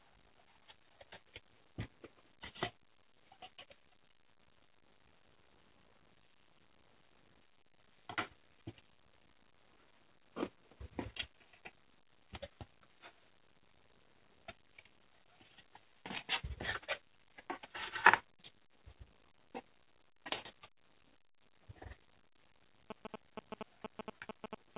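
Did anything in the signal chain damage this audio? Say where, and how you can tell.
Yes. In the network and jitter-buffer stage, packets arrived late repeatedly between 2.78 and 4.38 s, so the buffer kept running dry. Repeated stalls (stutter) result: about a dozen brief holds, none longer than 16 ms, each bridged by stretching the preceding sound, so nothing is lost but the audio drags and stutters.

The same buffer later held too much audio and trimmed it back. This jitter buffer speed-up is audible at 18.42 to 18.72 s (112% speed) and 21.54 to 21.86 s (110%), each time cutting a few tens of milliseconds, so the sound rushes briefly while its pitch stays unchanged.

In the analogue wiring, GSM signalling bursts from a nearby 2G phone are rectified into the audio from 22.90 s to the end. They form a galloping dit-dit-dit pattern of short 217 Hz buzzes at about 5 dB below the wanted signal, over a call-codec path whose bandwidth stops at 4 kHz.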